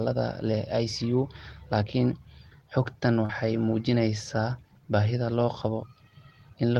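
At 3.25 to 3.31 s there is a short concealed packet loss: about 40 ms of speech arrived too late, and the receiver patched 37 ms by extending the preceding sound, heard as a brief smear. A spectrogram shows the preceding sound stretched flat, without natural movement, before blending back.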